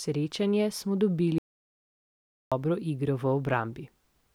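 Speech with an audio dropout to silence from 1.38 to 2.52 s: the sound stops mid-flow and returns after about 1.13 s of silence, with no room tone, likely from the input briefly disconnecting or muting. The waveform shows a flat line, the spectrogram a blank vertical band.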